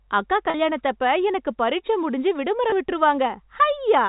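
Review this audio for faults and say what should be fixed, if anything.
Packet loss with pitch repetition occurs twice in the telephone-band G.711 audio: about 40 ms at 0.50 to 0.54 s, which fits two 20 ms packets, and about 20 ms at 2.70 to 2.72 s, just after "எனக்கு பரீட்சை முடிஞ்சு". The receiver filled each gap by repeating the last pitch period, so both sound briefly held and buzzy rather than silent. Adding jitter buffering and forward error correction on the link would prevent these dropouts.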